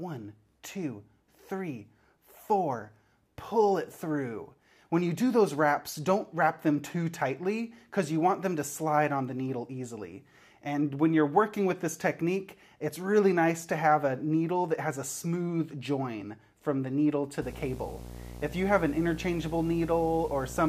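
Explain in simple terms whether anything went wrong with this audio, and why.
From 17.42 s to the end, a video or display buzz creeps in: a fairly loud 60 Hz hum with hiss on top, from a screen or video cable leaking into the audio.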